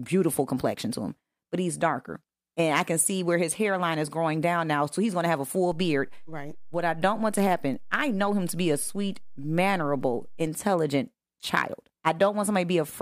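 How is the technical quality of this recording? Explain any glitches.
There's one real glitch here, a DC step in the middle of the speech. At 5.72 s, just after "to have a full", the waveform's zero line suddenly jumps by about -36 dBFS and stays shifted until 10.47 s, when it drops back. That kind of jump comes from something like a converter recalibrating or an offset input being switched in. You hear each edge as a low thump or click, while the speech itself carries on untouched.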